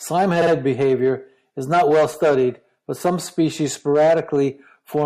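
Throughout, the speech sounds watery and swirly with smeared attacks, likely MP3 compression at a low bitrate around 64 kbps; a spectrogram shows a flat treble ceiling and flickering high-frequency holes. From 0.41 to 0.51 s, repeated frames produce a stutter: a 52 ms block, which fits two MP3 frames, plays twice more, adding about 0.1 s. The waveform shows identical segments.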